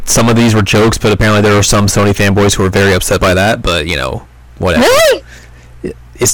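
Speech, with hard clipping running through the whole clip: the level feeding some stage sits about 23 dB beyond what it can pass, so around a third of the samples are cut off flat at the ceiling. Every loud syllable turns into a harsh, buzzy fuzz. On a waveform the peaks form solid flat-topped blocks, and a spectrogram shows dense harmonic energy smeared far up into the high kHz range above each voiced sound.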